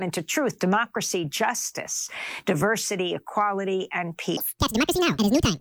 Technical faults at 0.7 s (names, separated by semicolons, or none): none